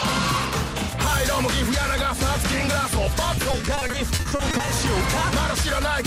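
From 3.35 to 4.69 s there's a run of repeated packet loss that gives the audio a robotic sound. Packets kept going missing or arriving late, and each hole got papered over by stretching the last bit of sound forward, only for the next hole to show up right after. There are 18 gaps, none longer than 40 ms, adding up to 420 ms, so about 31% of that stretch is patched. It comes across as choppy, with pieces missing.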